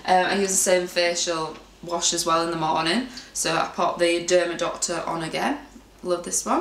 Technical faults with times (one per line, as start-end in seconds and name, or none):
none